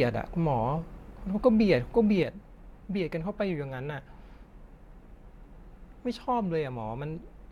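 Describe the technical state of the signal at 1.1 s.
At 1.1 s the signal is intact, with no dropout, clipping, distortion or other audible fault at that point in the speech.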